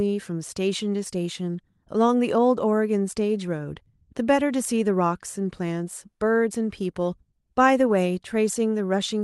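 A speech recording with no technical fault to report. It has passed through a WebRTC call path that is working normally, and its top end rolls off around 12 kHz, which fits an Opus codec running at a moderate bitrate of roughly 32 kbps.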